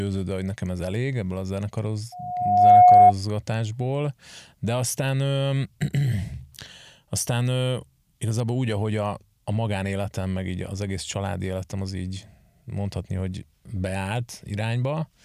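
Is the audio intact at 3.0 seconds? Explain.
No. At 3.0 s a loudspeaker feedback squeal is sounding, running from 2.12 to 3.13 s: a microphone re-amplifies its own loudspeaker until a 722 Hz tone runs away. Unlike a steady interfering tone, it swells over about half a second to roughly 15 dB above the speech.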